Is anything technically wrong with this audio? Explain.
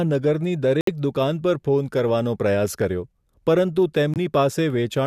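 Yes. The speech drops abruptly to silence from 0.81 to 0.89 s and again from 4.14 to 4.18 s, with no tail or fade, and timing carries on intact. This is corrupt frame muted: damaged compressed frames were rejected by the decoder, and the player filled their slots with silence.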